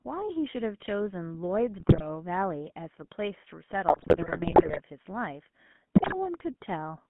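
GSM full-rate codec damage runs through the whole speech clip: the voice is band-limited to roughly 150 Hz to 3.4 kHz and has a buzzy, gravelly roughness, which fits the 13 kbps full-rate coder rebuilding the voice from a modelled vocal tract driven by sparse, regularly spaced pulses. GSM bit errors break up the sound at 1.8–2.04 s, 3.88–4.81 s and 5.94–6.16 s, where corrupted filter, pitch and gain values distort frames into squawks, pops and gargling.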